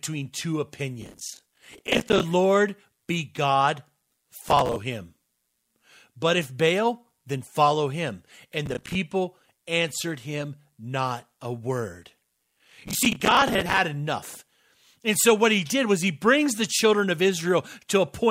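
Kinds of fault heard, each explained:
processor overload crackle: a gritty, tearing crackle rides on the speech in four bursts, longest at 1.0–2.2 s and 12.5–13.8 s after "him not a word". The processor misses many buffer deadlines in a row, filling each roughly 10 ms gap with hard-edged old audio.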